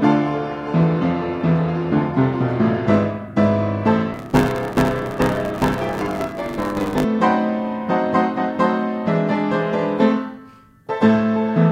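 From 4.12 to 7.05 s there is a block size mismatch (truncated). Each block arrives longer than the next stage reads, which fits a 512-sample write size, and the tail is discarded. The result is a 100 Hz buzz, with the sound running about 1.16 times faster at roughly its normal pitch.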